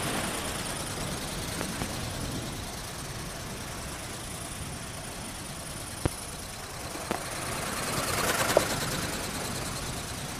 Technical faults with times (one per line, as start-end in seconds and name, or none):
1.61-1.84 loud pop
5.08-5.23 frames out of order
6.06-6.08 loud pop
7.11-7.14 loud pop